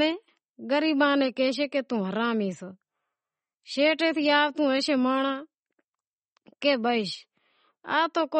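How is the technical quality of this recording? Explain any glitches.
The technical quality is poor, with audible codec damage across the whole speech clip. From start to finish the sound is watery and swirly, and nothing reaches above 8.4 kHz. The likely cause is MP3 compression at a bitrate that sounds close to 32 kbps. Short of bits, the encoder cut the treble and dropped weak frequency lines frame by frame, so s sounds chirp metallically and attacks smear. A simple low-pass filter would dull the top without this flickering swirl.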